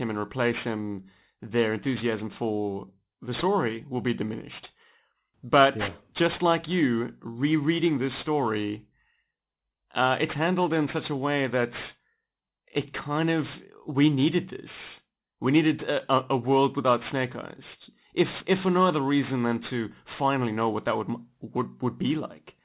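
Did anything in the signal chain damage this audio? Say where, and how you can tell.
Yes. Aliasing runs through the whole clip, introduced at a sample-rate conversion stage where the speech went from 44.1 kHz down to 8 kHz without an anti-alias filter. Energy above the new 4 kHz limit folds back below it, so sibilants sound gritty and metallic, with spurious components around 20 dB under the speech. A properly filtered downsample would just sound dull. Here the spectrum stays dense right up to 4 kHz with tones that don't track the voice.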